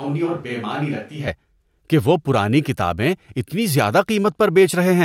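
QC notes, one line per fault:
0.00–1.27 s, switch to a distant microphone: speech opens roomy, hollow, thin and about 10 dB quieter over faint room noise. Likely a far mic until the close one cuts in.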